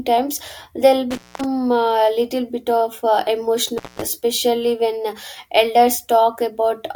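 At 1.11 s the speech cuts out with an intermittent contact. A loose plug or cable briefly opens the line. Crackle marks both edges, with faint hiss in the gap, open for 238 ms until 1.44 s. It recurs from 3.68 to 4.04 s, open 185 ms.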